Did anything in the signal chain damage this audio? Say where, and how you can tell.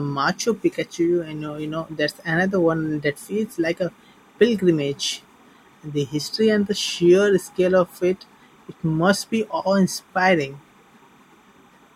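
Yes: a faint chirping warble sits well below the speech throughout, timecode bleed in the analogue wiring, where 30-frame linear timecode switching near 1 and 2 kHz leaks in from a neighbouring cable.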